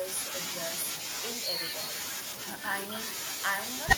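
Throughout the speech, every phrase is trailed roughly a third of a second later by a fainter, thinner copy sitting about 11 dB down. That is echo with no canceller: the far end's loudspeaker feeds its microphone, and the talker's voice returns uncancelled after the network round trip.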